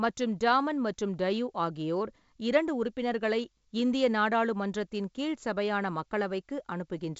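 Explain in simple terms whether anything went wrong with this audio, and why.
Nothing went wrong with this audio: the speech comes through as expected for a wideband phone call, with nothing heard that needs explaining.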